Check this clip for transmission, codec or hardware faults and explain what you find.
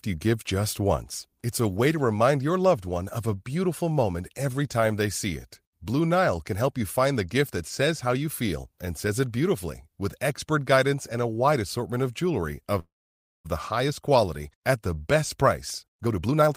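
Two transmission faults are audible, both tied to packet timing on the call path.

From 12.79 to 13.47 s, right after "assortment of jewelry of", there is a call audio freeze. Packets were most likely held up in transit, so the jitter buffer ran dry and the receiver had nothing new to play. It stretched the last sound into a short fading buzz or hiss, and then about 570 ms of near silence followed. When audio resumes at "the highest" nothing has been lost: the speech simply picks up where it stopped, now running about 652 ms later than before.

From 15.83 to 16.54 s, after "at the best", a jitter buffer speed-up follows. Having built up more delay than it targets, the receiver trimmed many small slices, each a pitch period or a few long, roughly 300 ms in all, to catch up. The speech plays at about 147% speed with its pitch unchanged, so this closing stretch sounds noticeably rushed.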